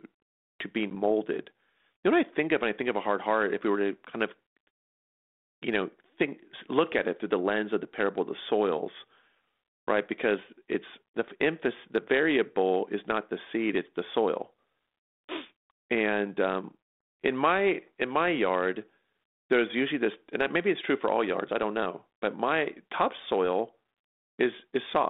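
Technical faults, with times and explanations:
0.90 to 0.96 s, packet loss on an ADPCM call: one packet of the 32 kbit/s G.726 stream, about 10 ms of sound, never arrived and was filled with silence, leaving a sharp-edged gap. The decoder's adaptive predictor and step size then no longer matched the sender's, so the audio resumes with some roughness until the adaptation converges a few tens of milliseconds later, within the 200 Hz to 3.6 kHz line band.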